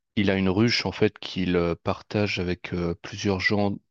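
No technical faults are audible.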